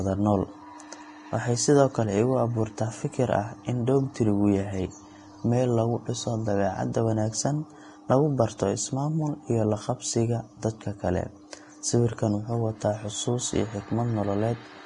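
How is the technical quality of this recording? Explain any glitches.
The technical quality is poor throughout because of one fault, heavy lossy compression. For the whole speech clip, nothing is present above 10.6 kHz, and the remaining treble sounds hissy and grainy, with roughened tones and smeared onsets. This is likely Vorbis compression at a low rate, consistent with roughly 30 kbps, where coarse quantisation turns fine detail into noise. A spectrogram shows a hard ceiling at 10.6 kHz and mottled, blotchy high bands.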